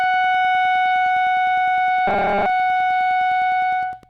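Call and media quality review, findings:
Wi-Fi interference throughout. Steady ticking about ten times a second, every 102.4 ms, about 35 dB below the music. Nearby radio beacon rectified in the analog path.

Robotic sound from repeated short buffers, 2.07 to 2.46 s. Metallic 200 Hz buzz. Likely late audio delivery; a 5 ms chunk is looped, replacing most of the music there.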